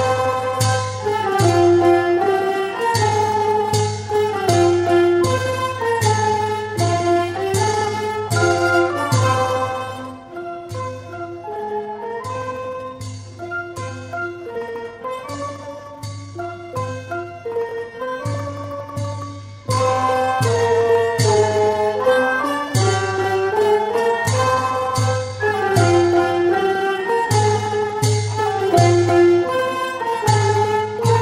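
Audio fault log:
No technical faults can be heard anywhere in the audio, and the signal stays steady and intact throughout.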